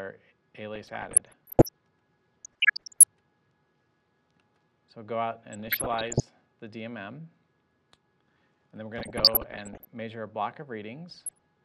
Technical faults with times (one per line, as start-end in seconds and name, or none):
0.75-1.74 DAB burbling
2.42-3.04 DAB burbling
5.53-6.20 DAB burbling
8.98-9.87 DAB burbling
11.10-11.45 DAB burbling